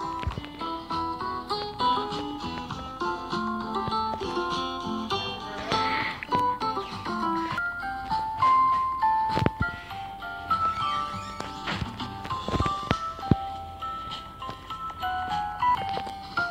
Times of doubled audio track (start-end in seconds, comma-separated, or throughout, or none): none